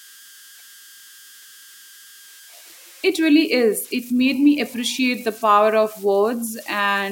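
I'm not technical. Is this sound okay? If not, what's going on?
No. Throughout the speech there are converter idle tones: a whistle around 1.5 kHz, made when the converter slips into repeating patterns on quiet passages.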